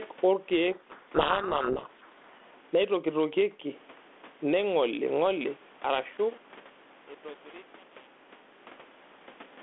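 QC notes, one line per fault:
Throughout: gain pumping. Loud and soft parts sit closer in level and the sound is squashed, with the gain swinging around 15 dB, likely from excess input gain driving a fast limiter.
0.72–2.4 s: codec payload misread. Speech is buried in harsh, rasping distortion because the decoder reads each G.726 code word in the wrong bit order.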